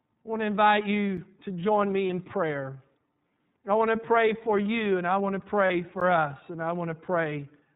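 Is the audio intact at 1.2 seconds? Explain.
No. Right around there, at 1.17 s, there's a block of digital silence, about 5.8 ms of zeros, which fits a 256-sample buffer the program didn't fill in time. The sound drops to nothing and snaps back with no fade, so you hear a small tick.

On top of that, the whole clip runs through the iLBC codec, with 30 ms frames and a rate that points to its 13.33 kbps mode. Nothing above 4 kHz gets through, and each frame is coded independently, so the speech sounds plainly rough and a bit synthetic.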